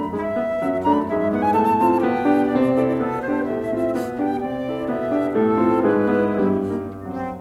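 No technical faults can be heard, so there is nothing to describe in time order.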